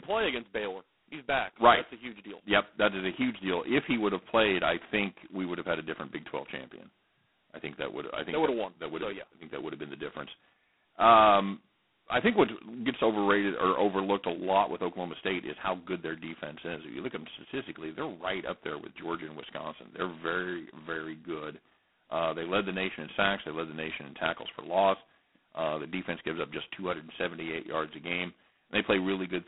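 From start to finish, the speech has been through G.726 ADPCM, and a heavy-handed version of it. The band is telephone-narrow, roughly 200 Hz to 3.4 kHz, with nothing at all above 3.9 kHz. Over that sits a harsh, rasping hiss that swells and fades with the speech level. That's what you get when each sample carries only a couple of bits of prediction error. The roughness points to the 16 kbit/s mode.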